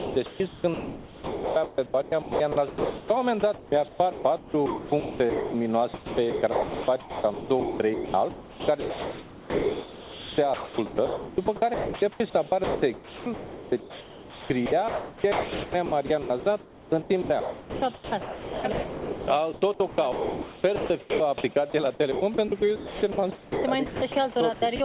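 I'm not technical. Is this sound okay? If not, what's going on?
No. The sound is chopped by the voice detector, likely because the sending side's detector kept switching off and on, so parts were swapped for a soft hiss. It sounds choppy from 0 to 3.1, 3.4 to 5.5, 5.9 to 12.2, 12.6 to 19.3, 19.5 to 21.4, 22.1 to 24.2 and 24.5 to 24.8 seconds.

At 21.70 to 21.74 seconds the sound is dropped by the voice detector: it likely mistook the sound for background, stopped sending, and a brief patch of steady hiss replaced it.

All of this came through a phone-style call line that carries nothing above 4 kHz.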